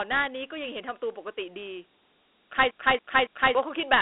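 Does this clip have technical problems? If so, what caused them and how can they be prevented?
Yes. Dialogic VOX ADPCM runs throughout. The sound sits in a 300 Hz to 3.5 kHz line band with nothing above 3.9 kHz, and a gritty hiss trails the speech. That fits 4-bit ADPCM at 32 kbps, likely 8,000 samples a second. The grit is what separates it from clean telephone band-limiting. Preventing it means recording or archiving in a wideband linear format rather than VOX.

From 2.71 to 3.55 s there is a CD stuck on one turn. The same 0.28 s segment plays three times, with a brief mute at each jump. Its steady, even loop rate sets it apart from irregular packet-loss repeats. Preventing it means ripping from a clean, unscratched disc with error-checking software.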